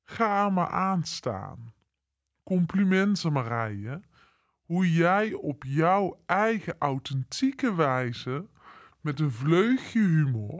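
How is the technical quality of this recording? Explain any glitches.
The whole recording is running at the wrong sample rate, so the speech is slow and low from start to finish. The samples are being played back at about 0.73 times the speed they were captured at, with no rate conversion, so the timing and the pitch drop together. That puts everything roughly five and a half semitones down and makes it noticeably sluggish. The ratio fits 22 kHz audio being played as if it were 16 kHz.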